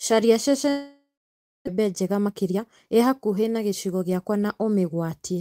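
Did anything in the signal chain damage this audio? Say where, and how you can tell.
Yes, at the network and jitter-buffer stage. From 0.69 s to 1.69 s there is a long network dropout, likely from lost packets. The last sound is stretched into a buzzy tail that fades, then about 0.6 s of silence follows, and the audio resumes at 1.69 s with about 0.6 s of material gone. A plain mute or gate would cut off cleanly. This fading synthetic tail is receiver concealment, which marks the cause as network loss rather than a switch.

From 1.77 s to 4.17 s there is a jitter buffer speed-up. The speech runs about 115% fast while its pitch stays unchanged. This happens when the receiver drops short pitch-period chunks over and over to shed roughly 0.4 s of built-up delay, the backlog left after the dropout. A sample-rate or clock mismatch would also speed the audio up, but it would raise the pitch along with it. 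Here only the timing changes, so the cause is time-scale compression in the buffer.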